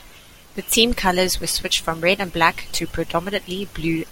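No technical faults can be heard anywhere in this speech recording; the signal stays steady and intact throughout.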